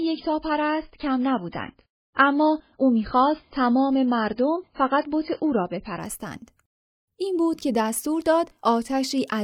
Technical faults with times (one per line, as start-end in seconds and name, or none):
0.00-6.00 adaptive stream starting at a low bitrate